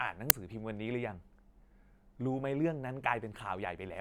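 A speech recording with one uninitialised buffer fault at 0.30 s. There, a block about 5 ms long is replaced by a loud crack that bears no relation to the surrounding audio. The playback path output that buffer before any audio had been written into it, so whatever values were left in that memory were sent out as samples.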